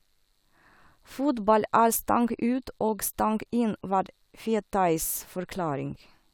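No technical faults can be heard anywhere in this recording.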